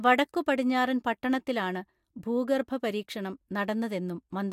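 No technical faults can be heard anywhere in the speech recording. Nothing interrupts or alters the sound at any point along the clip.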